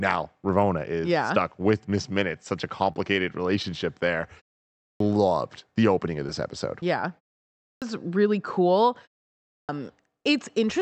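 Short concealed packet loss comes first. Right after "such a", from 2.92 to 2.97 s, about 30 ms of the call arrived too late for the decoder, and the receiver bridged the gap by extending the preceding sound before blending back in. This gives a brief smeared wobble. Two smaller gaps of about 10 ms each were patched the same way, at 3.63 to 3.65 s and at 6.27 to 6.29 s just after "the opening of". They leave a brief smear too.

There are also three clipped starts after a pause. Each follows roughly 0.4 s of silence, during which the output device dozed and then needed time to wake before it could play again. The first 260 to 300 ms of sound is lost each time, so speech jumps in abruptly with its onset missing: at 4.74 to 5.00 s, at 7.52 to 7.82 s just before "really cool", and at 9.41 to 9.69 s. The call path's high end stops around 8 kHz throughout.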